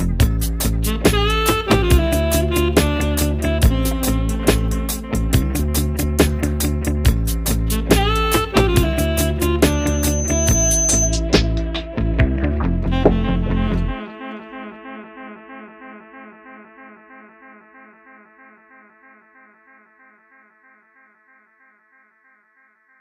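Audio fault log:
9.62–11.21 s, loudspeaker feedback squeal: a single tone at 6.2 kHz swells over about a second until it sits at roughly the same level as the rest of the audio, then stops at 11.21 s. The microphone is hearing its own loudspeaker, and at that one frequency the loop returns more than it sends, so the tone feeds on itself. Unlike a steady electrical whine, it starts from nothing and grows.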